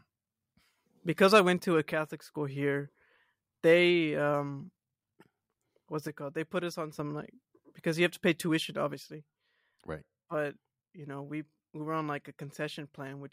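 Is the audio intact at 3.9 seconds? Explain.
Yes, the speech at 3.9 seconds plays through intact, with no dropout, click, distortion or other fault at that moment.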